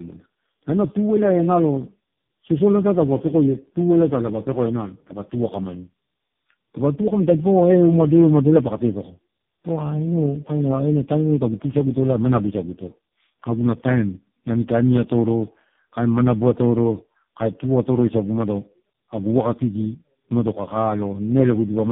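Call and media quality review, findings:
Tandem speech coding throughout: sound points to three speech codecs decoded and re-encoded in series, errors compounding. Speech rough, muffled, warbly; nothing above 3.6 kHz.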